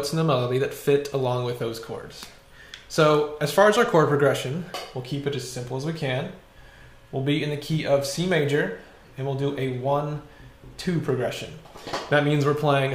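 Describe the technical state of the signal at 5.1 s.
Nothing goes wrong with the signal at 5.1 s; the audio is intact at that point.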